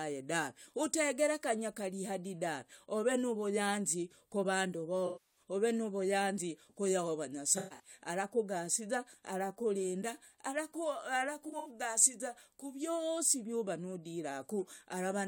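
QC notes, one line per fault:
5.06–5.40 s, AAC frame loss with concealment: between "nuvuyanzi kuvandu" and "ove nuvuyanzi ku yahova", about 0.3 s of lost audio is filled from the last good spectrum, a smeared, noisy patch that never drops to hard silence as a plain dropout would.
7.58–7.91 s, AAC frame loss with concealment: before "arakugasiza arakurinda", 0.19 s lost in pieces across 0.26 s, longest around 0.15 s, giving a phasey flutter.
11.48–11.70 s, AAC frame loss with concealment: 0.11 s lost across 0.17 s, a brief smear.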